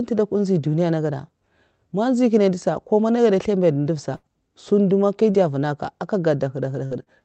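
A burst of packet loss at 4.15 to 4.26 s interrupts this speech recording. About 80 ms of audio never arrived in time, so the receiver stretched the last sound it had over roughly 77 ms while fading it down, giving a held buzz or fading hiss. When playback picks up again, the stretch in between is simply gone. Short concealed packet loss occurs at 5.31 to 5.37 s, 6.86 to 6.94 s and 7.03 to 7.09 s, each losing about 40 ms. The decoder patched each hole by extending the preceding sound, pitched if voiced and noise-like if not, for about 32 to 45 ms, then blended back into the real signal. The result is a brief smear or wobble, and a short consonant can drop out. All of this rides on a call-codec path whose band limit sits near 8 kHz, consistent with Opus at a modest bitrate around 24 kbps.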